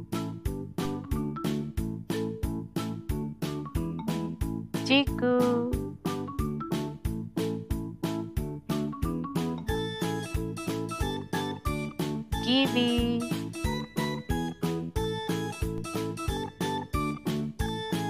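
There's a DC step at 15.78 s: the waveform's zero line suddenly jumps by about -30 dBFS, which you hear as a single low thump or click while the sound carries on unchanged underneath. The offset doesn't hold; it bleeds away afterwards, which fits a high-pass around 5 Hz pulling it back to zero. That's the kind of jump you'd get from a converter recalibrating or an offset input being switched in.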